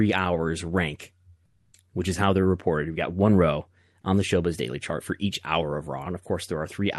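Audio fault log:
1.45 to 1.73 s, comfort noise in place of the background: for 280 ms the real background, about 45 dB below the loudest speech, becomes a smooth, featureless hiss about 3 dB quieter. Opus discontinuous transmission likely paused sending, and the receiver synthesised this noise.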